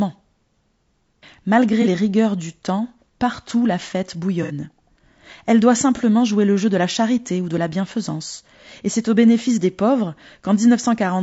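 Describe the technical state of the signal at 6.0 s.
AAC frame loss with concealment occurs from 5.96 to 6.01 s, just before "jouer le jeu de". About 30 ms of audio, consistent with a single dropped frame, was rebuilt by the decoder from the preceding spectrum, leaving a brief smeared, noisy patch instead of clean speech.

Around that point, and across the whole clip, the speech is plainly rough and grainy, with noise between the harmonics and an artificial-sounding top band. The likely cause is low-delay AAC-ELD compression at a rate pointing to roughly 32 kbps, whose short frames resolve pitch harmonics poorly.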